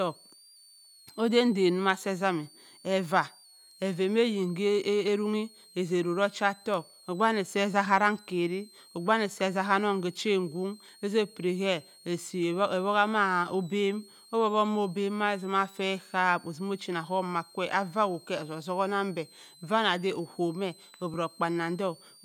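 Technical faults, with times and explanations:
throughout: switching supply whistle. A thin high tone wanders between about 3.7 and 4.8 kHz, centred near 4 kHz and sitting about 30 dB below the speech. It comes from a power supply cycling in an audible range. On a spectrogram it appears as a faint horizontal line that drifts in pitch.
9.32–9.34 s and 21.14 s: repeated buffer. Just after "ogbe wani", a 10 ms block plays twice more, and at 21.14 s one plays once more, because fresh audio arrived late and nothing was skipped. Such short repeats come across as a click or brief buzz. The waveform shows identical 10 ms cycles with hard joins, and the spectrogram shows thin vertical marks.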